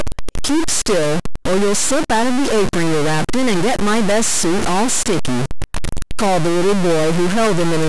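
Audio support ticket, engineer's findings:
Harsh buzzy distortion on the speech, throughout the clip, plus a steady noise bed filling every pause. Probable component: converter or a data line between it and the recorder, likely a stuck bit. One bit is held fixed, so roughly half the samples jump by a step of about -15 dBFS. Unlike clipping, it isn't confined to peaks. Unlike low bit depth, the pauses carry loud noise rather than near-silence.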